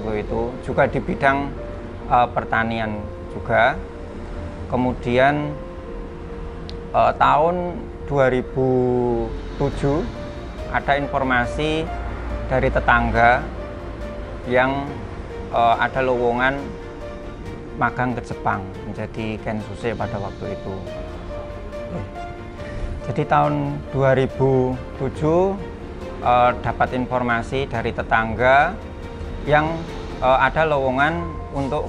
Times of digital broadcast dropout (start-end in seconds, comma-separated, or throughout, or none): none